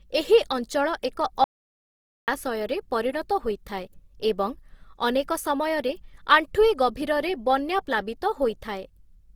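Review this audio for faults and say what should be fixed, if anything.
Opus compression runs through the whole speech clip. The grain is plainly audible. Tonal parts sound rough and noisy. Content still reaches about 20.2 kHz, so the band stays full. This is likely Opus in music (CELT) mode, at a rate that fits roughly 24 kbps. Too few bits force bands to be filled with noise. Encode at a higher bitrate, or keep an uncompressed master.

Audio dropout to silence occurs from 1.44 to 2.28 s. The sound cuts out for about 0.84 s. The gap is silent, with no room tone. Whatever was said there is lost. The likely cause is a lost input, such as a link failure or a momentary mute. Secure connections and monitor the input level while recording.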